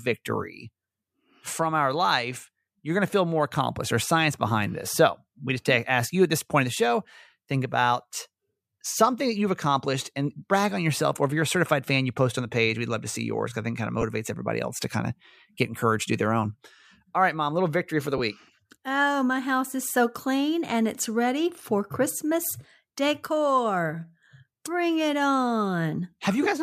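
A brief noisy smear replaces the sound at 14.01 to 14.03 s, between "I think kind of" and "everybody else to kind", and again at 18.18 to 18.20 s, right after "little victory for the". These are lost LE Audio frames. About 15 ms of audio failed to arrive each time, which fits two 7.5 ms frames. The LC3 decoder filled each gap by reusing the last spectrum with randomised signs, which blurs the tonal detail into noise.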